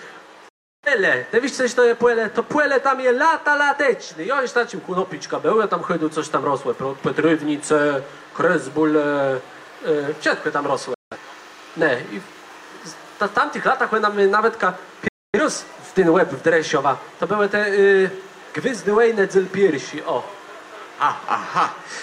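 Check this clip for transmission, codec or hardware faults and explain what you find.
Three digital broadcast dropouts are present, at 0.49 to 0.88 s, 10.94 to 11.17 s and 15.08 to 15.39 s. Each time, the sound fades out within about 3 ms into silence lasting roughly 340, 170 and 260 ms, then resumes further along. The receiver muted after losing or rejecting frames, and whatever was sent during those gaps is gone.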